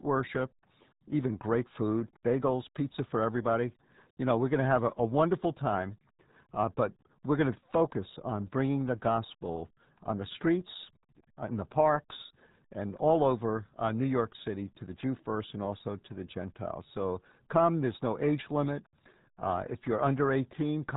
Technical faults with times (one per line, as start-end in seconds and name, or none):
0.00-20.96 RealAudio 14.4 codec